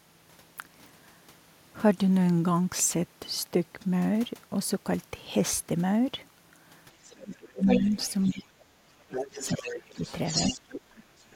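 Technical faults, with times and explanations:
7.08 s, other side's voice leaking through: a very faint scrap of the far end slips in, likely the loudspeaker echo the canceller didn't fully remove.
7.11 to 7.63 s, speech suppressed in double talk: the talker drops by about 30 dB for half a second, likely because the canceller couldn't tell them from the echo and turned everything down.
7.65 to 8.32 s, other side's voice leaking through: this time the far side comes in nearly as loud as the talker, likely a big chunk of echo getting past the canceller.
8.31 to 9.98 s, speech suppressed in double talk: the longest dip, around a second and a half of the talker pushed down as much as about 30 dB, likely the canceller clamping while both sides talk.
9.14 to 10.6 s, other side's voice leaking through: the far voice sits about 10 dB under the talker, overlapping the dip, likely residual echo again.
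10.63 to 10.8 s, speech suppressed in double talk: a brief, deep cut to the talker, likely the same double-talk clamp.
10.92 to 11.03 s, other side's voice leaking through: one last faint fragment of the far end, likely leftover echo.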